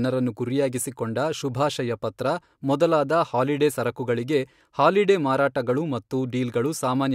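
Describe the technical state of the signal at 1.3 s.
At 1.3 s the signal is intact, with no audible fault in the speech at that point.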